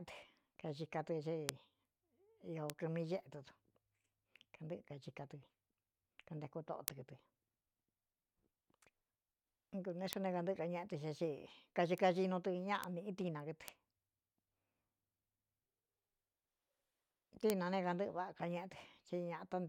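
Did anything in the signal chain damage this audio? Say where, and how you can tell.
Yes, bit error spikes at 1.49, 2.70, 6.88, 10.13, 11.98, 12.84, 13.68 and 17.50 s: isolated broadband ticks up to about −12 dBFS, unrelated to the speech. Single flipped bits in storage or a digital link produced them.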